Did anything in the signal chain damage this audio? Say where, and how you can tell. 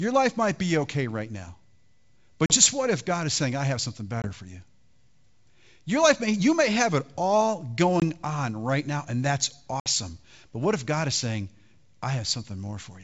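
Yes, at the network stage: packet loss on an ADPCM call, carried over the G.722 wideband link. Hard silent holes appear at 2.46–2.57 s (about 40 ms lost, just before "what if"), 4.22–4.28 s (between "saying I have something" and "for you"), 8.00–8.03 s (between "may have it all" and "on right now and"), and 9.80–9.88 s (about 60 ms lost). The 20 ms steps fit one lost packet per 20 ms. On a waveform each hole is a flat gap with abrupt edges, and a spectrogram shows a full-band blank column. The speech resumes slightly distorted because the decoder's predictor and step size have drifted from the sender's, and it settles within tens of milliseconds.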